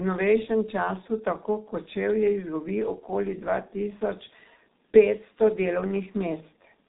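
A speech clip carrying heavy G.723.1 codec damage throughout. Nothing above about 3.8 kHz survives, so it sounds muffled, and the coarse, slowly updated voice model leaves a hoarse texture and smeared consonants, which fits a 6.3 kbit/s stream.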